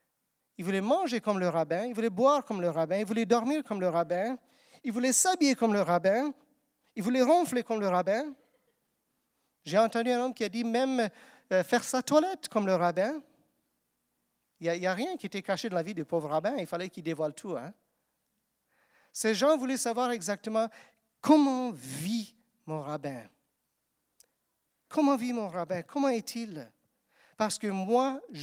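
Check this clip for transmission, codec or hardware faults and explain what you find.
Two related timing faults run through the whole speech recording, both caused by the sender's clock running ahead of the receiver's.

Clock drift between sender and receiver affects the entire clip, with the sender running fast by around 4 percent. Audio arrives faster than it is played out, so the jitter buffer keeps filling. On a waveform or spectrogram the sign is a string of small splice points rather than any steady change in pitch or level.

Repeated timing corrections run from 0.21 s to 28.34 s and match a speed of 104 percent. To keep the buffer from overflowing, the receiver repeatedly cuts out short pieces, always in the same direction and at uneven intervals. These are heard, if at all, as small hiccups or an unsteady tempo. Each cut shows as a tiny discontinuity in the waveform and a narrow vertical seam in the spectrogram.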